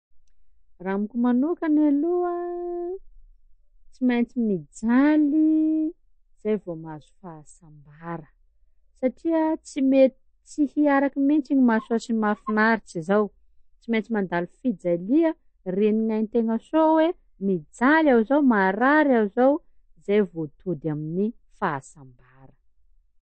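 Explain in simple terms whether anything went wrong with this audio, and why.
Something did go wrong: the speech was squeezed too hard, most likely by MP3 compression with too little data to spend. To save space, the encoder threw away everything above about 8.3 kHz and kept switching weak parts of the sound on and off. From start to finish the speech sounds dull and muffled at the top, with a watery, swirly quality and metallic edges on s sounds, and the damage is plainly audible.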